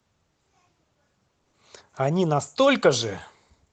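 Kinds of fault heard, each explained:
Short stall from a late packet: a packet arrived late and the jitter buffer ran dry, so the receiver held the last sound for about 20 ms until it came, then resumed where it left off, leaving a briefly stretched sound with a faint buzz or dip near 1.43 s and nothing lost.
Short concealed packet loss: about 40 ms of audio never reached the decoder in time, so the receiver extended the preceding sound to cover the gap and blended back in, heard as a brief smear or wobble from 1.49 to 1.55 s where that stretch of sound is gone.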